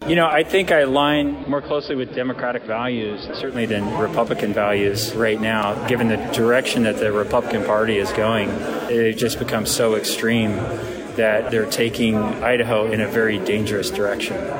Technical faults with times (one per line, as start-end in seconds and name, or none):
0.32 repeated buffer
1.11-3.68 digital radio blending to analogue
5.63 repeated buffer